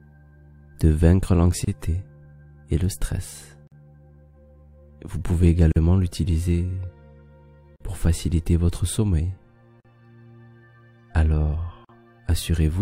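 Gaps at joins of encoded pieces open at 1.65, 3.67, 5.72, 7.76, 9.80 and 11.85 s, every 2 s: short silences, 27 ms first then 43 ms, left where separately encoded chunks were butted together untrimmed.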